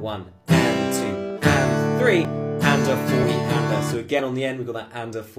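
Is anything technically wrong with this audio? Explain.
Yes. There are brief skips from overlap between stream segments at 1.30 s, 2.25 s and 4.19 s. The sound is delivered in one-second segments whose timestamps overlap, so the player discards material it wrongly treats as duplicated, roughly 12 to 15 ms each time. Each drop is heard as a small click or tiny jump. On a waveform the trace steps abruptly with no gap, and a spectrogram shows a thin full-height vertical line at each time.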